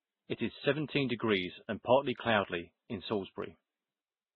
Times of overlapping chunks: none

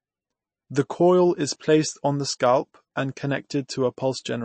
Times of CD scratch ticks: 2.23-3.36

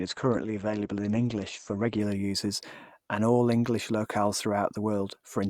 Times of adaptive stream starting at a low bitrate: 0.00-2.00

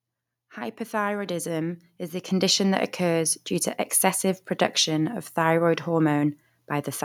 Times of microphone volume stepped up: 1.26, 2.28

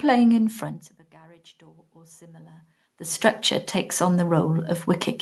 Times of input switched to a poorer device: none

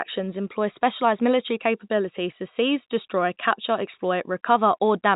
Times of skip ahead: none

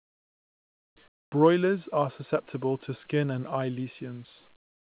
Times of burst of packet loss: none

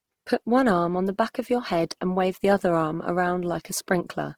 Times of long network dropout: none

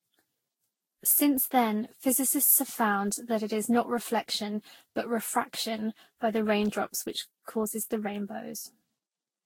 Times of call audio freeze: none

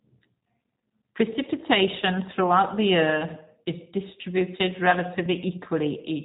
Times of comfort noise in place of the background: none

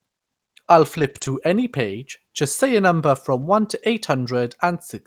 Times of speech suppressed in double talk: none

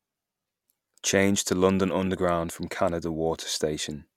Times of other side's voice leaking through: none

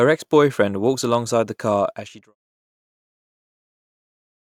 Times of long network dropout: none

